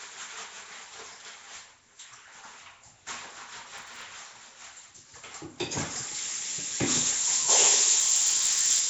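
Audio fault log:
throughout, Nellymoser compression: The audio was likely passed through the Nellymoser Asao codec, which spends a fixed, small bit budget on each short block and gives nothing to weak bands, filling them with noise instead. The damage is plainly audible: a rough, hissy haze clings to the sound, detail smears into a watery blur, and nothing survives above about 7.7 kHz, consistent with a rate around 32 kbps.
3.78–4.02 s and 8.00–8.80 s, processor overload crackle: In both spans the processor fell behind and repeatedly failed to fill its very short output buffers, each well under a millisecond long, on time. A few dozen deadlines were missed in the first span and several dozen in the second. Every miss drops a sliver of silence with hard edges into the stream, so the sound turns gritty and torn with crackle that lasts until the load eases.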